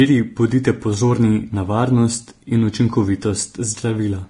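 Throughout, the speech shows heavy Vorbis compression, likely from a bitrate near 32 kbps. Nothing survives above 10.6 kHz, and the treble detail turns to grainy hiss rather than MP3-style warble.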